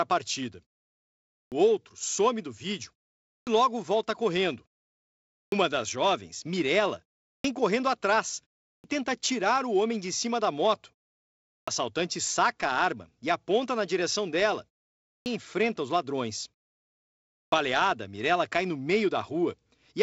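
Speech with a clipped start after a pause, heard eight times: at 1.45, 3.41, 5.46, 7.38, 8.78, 11.61, 15.19 and 17.46 s. Each follows a silence of 0.4 to 1.0 s. Each time the first 59 to 69 ms of sound is missing, so speech begins abruptly. The output device appears to sleep during silence. It then needs that time to wake and lock before sound passes again.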